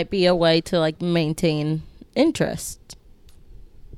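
At 0.59 s the speech jumps forward. This is compressed frames skipped: a chunk of encoded audio was never played, either missing from the file or rejected by the decoder as damaged. Roughly 20 ms of sound vanishes, which points to a single lost frame and fits a 24 ms frame length. The speech lurches ahead at the join.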